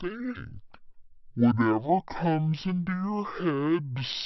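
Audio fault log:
throughout, wrong sample rate: the whole thing runs at half speed and sits a full octave low, 12 semitones down, so the speech comes out deep, slow and dragging. Speed and pitch drop together by exactly the same factor, which is the giveaway that nothing was resampled. The samples are just being clocked out slower than they went in, which fits audio captured at 48 kHz being played back as if it were 24 kHz.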